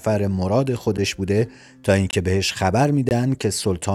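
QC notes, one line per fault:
0.97 s, 2.11–2.13 s and 3.09–3.11 s: block of digital silence. The speech samples were replaced by zeros with no fade in or out. The 9 ms gap at 0.97 s is a tick, and the two 20 ms gaps are short holes.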